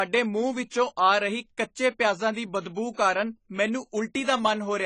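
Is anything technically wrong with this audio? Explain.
Yes. Throughout the speech, nothing sounds above 10 kHz. The audio is dull and smeared, with a fizzy warble on sibilants. The likely cause is AAC compression. Quantising each frame coarsely drops the top band and leaves spectral holes, which fits roughly 24 kbps.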